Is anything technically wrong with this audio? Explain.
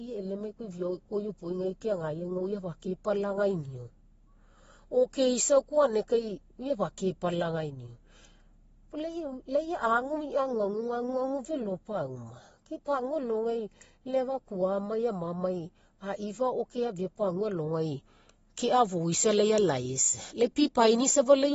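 Yes. Throughout the speech, the sound is dull and smeared, with nothing above about 7.6 kHz and a warbling, fizzy texture on sustained sounds and sibilants. This is likely AAC compression at a low bitrate, which fits around 24 kbps AAC-LC, where the encoder drops the highs and coarsely quantises what remains.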